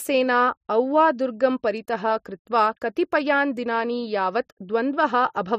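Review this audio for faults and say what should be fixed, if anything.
At 2.81 s, just after "औवा दुर्गं परितः कृत्वा", there is pre-echo. A brief hiss arrives before a sharp attack in the speech. It spreads about 10 ms ahead of the onset. The attack itself sounds softened and smeared. A transform codec shares its quantisation noise across a whole block. This attack lands late in its block. So noise meant for the loud part leaks into the quiet moment before it. To prevent it, encode with block switching enabled and allow a higher bitrate on transients.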